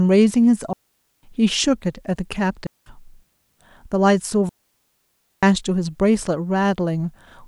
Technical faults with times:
0.73-1.23 digital wireless dropout
2.67-2.86 digital wireless dropout
4.49-5.43 digital wireless dropout

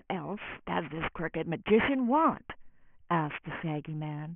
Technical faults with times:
0.00-4.35 aliasing

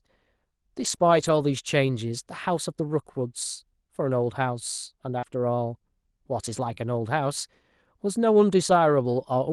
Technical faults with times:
0.79-1.49 lost packet rebuilt from error correction
0.95-0.99 short concealed packet loss
1.83-1.89 lost packet rebuilt from error correction
5.19-5.24 short concealed packet loss
5.22-5.24 lost packet rebuilt from error correction
6.70-6.85 lost packet rebuilt from error correction
6.74-6.78 short concealed packet loss

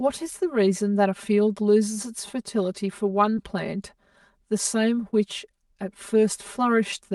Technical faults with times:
0.00-7.14 channel delay (comb filtering)
3.35-3.39 short concealed packet loss
5.09-5.14 short concealed packet loss

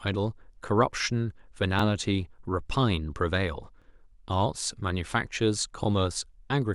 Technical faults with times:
1.79-1.82 overlapping chunks
3.82-3.84 overlapping chunks
5.84-5.86 overlapping chunks

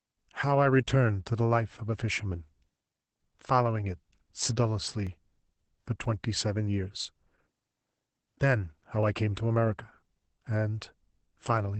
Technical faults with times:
0.00-11.80 Opus voice compression
3.08-9.03 periodic USB or driver dropouts

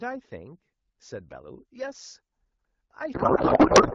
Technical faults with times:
3.14-3.94 codec payload misread

